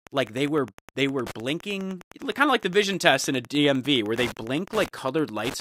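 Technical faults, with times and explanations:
Throughout, Wi-Fi interference. A steady ticking runs under the speech at about ten ticks per second. The tick spacing is 102.4 ms, the interval at which a Wi-Fi radio sends its beacon. A transmitter sits close to the audio circuitry. The circuit rectifies each radio pulse, turning it into an audible click. The ticks sit roughly 20 dB below the speech.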